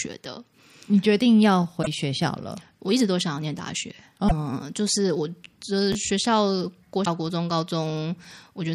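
A speech recording with three brief garbled skips, at 1.82 to 1.87 s, 4.27 to 4.32 s and 7.04 to 7.07 s, each a momentary smear where the sound jumps ahead. These most likely come from a broken MP3 bit reservoir: with frames missing, the next frame's borrowed data is read from the wrong place, spoiling one or two frames of roughly 26 ms each. At 5.92 to 5.95 s a short jumbled flicker is chunks out of order: one chunk of about 12 ms plays one position late, after the chunk that should follow it, so nothing is lost but there are three hard joins.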